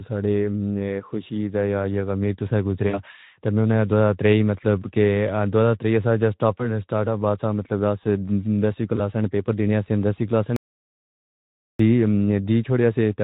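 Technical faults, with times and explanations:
2.87–3.01 s, 6.57–6.63 s and 8.95–9.01 s, VoIP packet loss concealed by the speech codec: about 60 ms, then 20 ms twice, went missing. The decoder extrapolated its last pitch and filter at falling gain, so speech smears into a brief fading buzz or coloured noise, after "غم ایک تو سا" and after "والا مطلب آسے دسویں".
10.56–11.79 s, audio dropout to silence: the input signal was cut off, likely by a failed link or device, while recording kept writing silence. Right after "دینیا سی دسویں کلاس" the sound stops dead for about 1.23 s with no room tone, and that stretch is lost.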